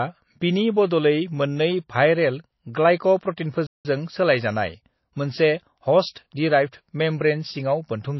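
From start to finish the speech sounds watery and swirly, with chirpy s sounds. This is likely MP3 compression at a bitrate near 24 kbps. Unlike simple low-pass filtering, the remaining detail flickers from frame to frame.

At 3.67 s the audio stops dead for about 180 ms and resumes at 3.85 s. This is a playback stall, likely the player running short of data. A dropout or packet loss would be brief or patched over, but here the sound simply halts in mid-flow, then continues.

At 6.12 s a short hiss runs for about 38 ms just before a sharp attack, which sounds softened. This is pre-echo: the coder spread its noise across the whole block, into the quiet moment ahead of the onset. An ordinary echo would come after the sound, not before it.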